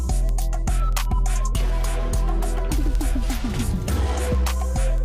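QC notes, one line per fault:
0.17–4.98 s: word clock ticks, steady clicks about every 0.15 s as an unlocked receiving clock drops or repeats one sample.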